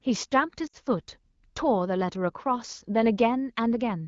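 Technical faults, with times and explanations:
0.67–0.76 s, lost AMR speech frames: the decoder repeats the last good frame's settings with falling gain for 60 ms, fitting three 20 ms frames. The spectrogram shows smeared, flattened harmonics, and the waveform shows a shrinking envelope.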